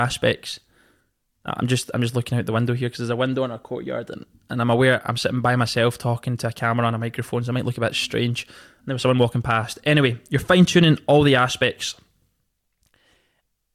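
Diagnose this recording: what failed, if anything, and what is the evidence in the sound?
Nothing failed: no stage in the chain, from wiring through to playback, leaves any audible defect in this speech recording.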